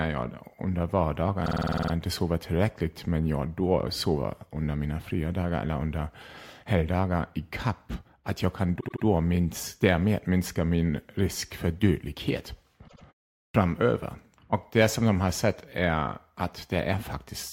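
At 1.45 s the speech stutters with repeated frames. A block of about 52 ms plays nine extra times before "inte sover tillräckligt men". That fits two compressed frames being written again and again. The loop adds 0.47 s.

At 8.79 s it happens again, between "kapp att jag kan" and "minst därmed minska min". This time a block of about 78 ms repeats three extra times and adds 0.24 s. At 12.87 s, after "min risk för dödlighet", a 78 ms block plays twice more and adds 0.16 s. Both sound like a short stammer.

At 13.48 s there is a clipped start after a pause. A 0.44 s gap comes first. The output device has dozed off in that silence and needs time to wake. About 62 ms of the onset is lost, so the next sound jumps in abruptly without its opening.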